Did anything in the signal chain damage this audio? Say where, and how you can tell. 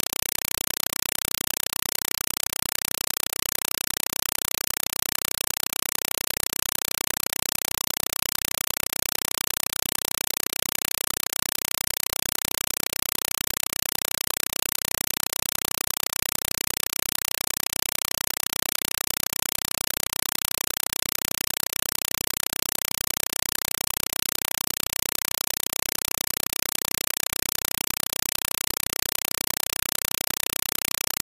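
Yes. The damage is at the playback stage, on the digital output link: compressed stream played as audio. For the whole clip there is only very loud, chattering static, made of bursts of noise about 4 ms long, each followed by silence, repeating 31.25 times a second. That rhythm matches AC-3 frames, which fits a 192 kbps Dolby Digital stream. The receiver took the undecoded data as ordinary samples, so the coded bytes were heard directly as noise and padding.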